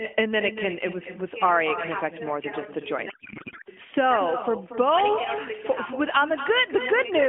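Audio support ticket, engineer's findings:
Echo with no canceller, whole clip: every phrase shadowed by a quieter, thinner copy about 10 dB down, roughly a fifth of a second late. Far end's speaker bleeding into its mic and looping back over the network, nothing cancelling it.

Codec payload misread, 3.10–3.69 s: speech swaps to garbled warble that barely tracks it, then snaps back. Sounds like octet-aligned AMR frames unpacked as bandwidth-efficient, so fields land in the wrong spots. Narrowband AMR underneath, 250–3400 Hz, fits 12.2 kbps mode.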